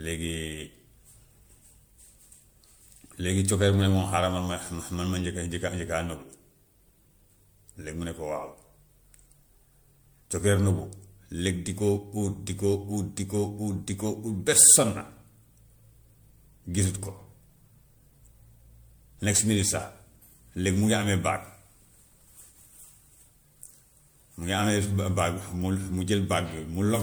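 Speech with generation loss throughout: a swirly, hollow, smeared sound with blurred consonant onsets, likely from repeated MP3 re-encoding, around five passes, fitting 96 kbit/s. A spectrogram shows speckled holes and smearing across the bands, with nothing above 20.1 kHz.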